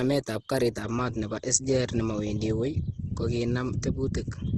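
Throughout, the speech sounds grainy and rough, with nothing above 12.2 kHz. That's likely Opus compression filling bit-starved bands with noise, which fits a rate around 16 kbps.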